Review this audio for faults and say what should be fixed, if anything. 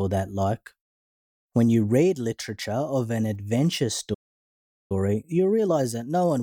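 Right after "of an adventure", the speech cuts to silence at 4.14 s and stays dead for about 0.76 s, resuming at 4.92 s. This is a playback stall: the player most likely ran short of buffered audio, or its output thread was held up, so nothing reached the output until data flowed again. Preventing it calls for a larger playback buffer and a real-time-priority audio thread that nothing else can block.

From 4.92 s to the end at 6.43 s, the speech sounds hurried but keeps its normal pitch. This is time-compressed catch-up: to clear the backlog left by the stall, the player trims small slices out of the signal and cross-fades across the joins, playing the remainder about 1.1 times faster. Once the stall itself is eliminated the player has no backlog to chase, so removing the stall's cause is what prevents this catch-up.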